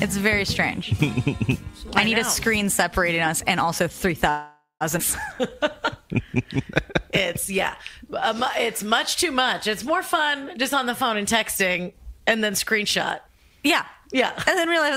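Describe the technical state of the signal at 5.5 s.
A jitter buffer slow-down runs from 5.34 to 7.22 s. With its reserve running short, the receiver repeated single pitch periods to stretch the sound, adding 88 ms and playing at 96% speed, so it drags slightly while the pitch stays the same.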